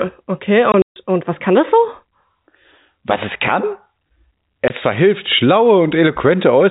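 Packet loss filled with silence strikes between 0.72 and 0.96 s, just before "und was kann das": lost packets were replaced by silence, leaving 160 ms of hard-edged gaps, the longest 140 ms. A lone 20 ms hole at 4.68 s fits 20 ms packets.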